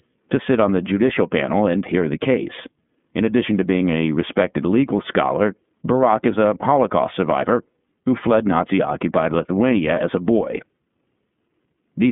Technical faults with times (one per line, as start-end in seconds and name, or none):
0.00-12.12 iLBC codec